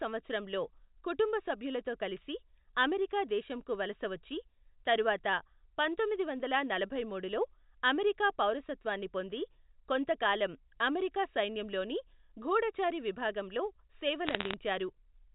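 From 14.26 to 14.54 s, bit errors on a digital phone line flip individual G.711 samples at a low error rate, giving sharp ticks of crackle over intact speech, not the gaps of lost packets.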